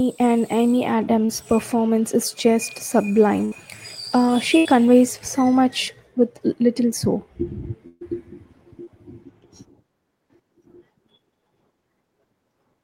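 At 1.25 s, just before "performance is just", there is a short concealed packet loss. About 40 ms of the speech never arrived in time. The receiver covered the hole by extending the sound that came before it, then blended back into the real signal. It is heard as a brief smear lasting about 36 ms.

Bursts of packet loss follow at 3.45 to 3.54 s, at 4.58 to 4.67 s, and at 7.87 to 8.03 s. The second comes right before "so much with little". In each, several packets in a row failed to arrive. The gaps are about 66, 74 and 137 ms, with about 60, 80 and 140 ms of speech missing. The receiver held the last sound and let it fade, then resumed further along, so a piece of speech is skipped. The last burst fades into about 10 ms of silence before the speech returns.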